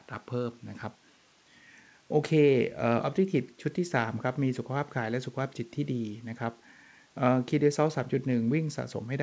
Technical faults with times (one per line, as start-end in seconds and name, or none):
none